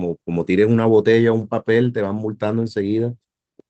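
No technical faults occur in this speech clip, so there are none to describe in time order.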